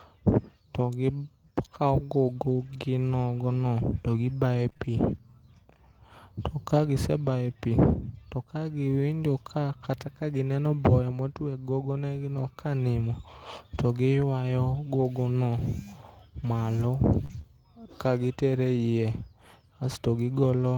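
From 0.75 to 4.99 s, scattered short gaps appear: about three small packet holes, none longer than about 20 ms, each patched by extending the preceding sound.

At 12.41–12.47 s, just before "ka nimo", and 14.49–14.51 s, before "gogo no", a lost packet rebuilt from error correction plays a low-bitrate redundant copy. There is no gap, but those 40 ms and 20 ms stretches sound rougher and noisier.

At 17.25–17.31 s a burst of packet loss removes about 40 ms of audio. The concealer holds and fades the last sound into a brief buzz or hiss, and the speech resumes with that portion missing. It overlaps a further error-correction rebuild at 17.29–17.39 s, which adds about 60 ms of coarser, noisier texture.

At 17.41–17.45 s, right before "kagi tero", a short concealed packet loss fills about 20 ms by extrapolation, heard as a quick smear.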